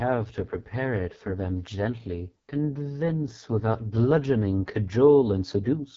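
Throughout the speech, AMR wideband (HD Voice) codec damage is heavy: the rough, raspy texture fits its lowest 6.6 kbit/s mode, with the pulse-driven model failing. A spectrogram shows smeared harmonics and a hard ceiling near 7.5 kHz, nothing above it.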